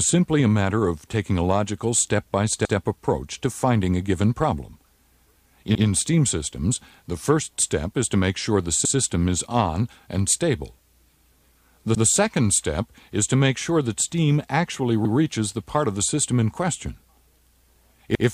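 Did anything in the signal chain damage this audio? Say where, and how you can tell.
Yes. The damage happens at the buffer stage, where the audio is handled in blocks. There are overlapping chunks at 2.65–2.75 s, 5.75–5.85 s, 11.95–12.05 s and 18.15–18.25 s. At each of these joins a 100 ms stretch of sound plays twice, so you hear a short stutter and click. The blocks appear to be 3 s long, and each new block starts 100 ms before the previous one has finished. Because of that, the overlapping section is repeated instead of being trimmed or crossfaded.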